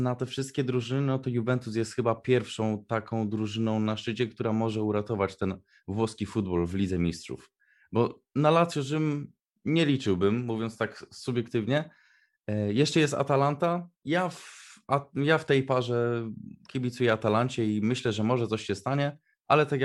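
No technical faults can be heard anywhere in the recording.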